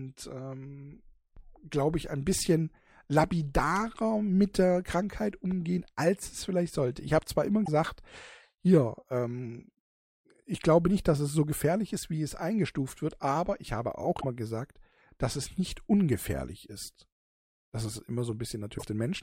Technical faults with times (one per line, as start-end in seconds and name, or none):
7.64-7.68 broken MP3 bit reservoir
14.20-14.24 broken MP3 bit reservoir
18.77-18.83 broken MP3 bit reservoir